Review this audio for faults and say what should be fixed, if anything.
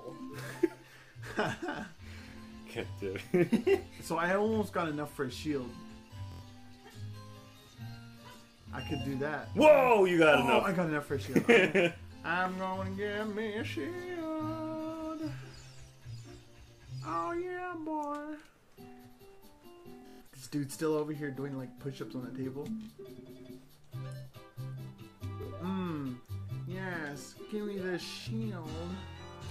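Bluetooth stutter: the wireless link lost or delayed audio packets, and the receiver replayed its last slice, about 23 ms long, until new data arrived. A single repeat is a brief hiccup, and longer runs become a machine-gun buzz before the sound jumps ahead. It occurs at 2.30 s (23 ms), 6.32 s (93 ms), 8.62 s (46 ms), 20.02 s (163 ms lost across 186 ms, longest run 139 ms), 22.83 s (46 ms), 25.43 s (23 ms) and 28.21 s (46 ms). To prevent it, keep the devices close and free of radio interference, or record over a wired connection.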